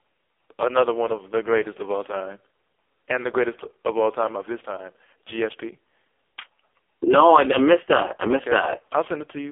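Speech running the whole clip through an AMR narrowband mobile codec: nothing passes above 3.4 kHz or below 300 Hz, and heavy buzzy, synthetic coding damage points to AMR-NB's lowest 4.75 kbps mode. A plain telephone band filter would narrow the sound without this robotic, vocoder-like texture.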